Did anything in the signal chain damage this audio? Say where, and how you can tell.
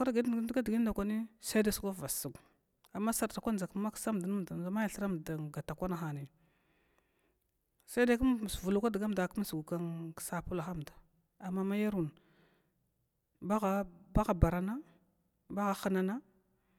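No, nothing along the chain left a mark on this speech recording that I can hear, so there's no stage to point at here.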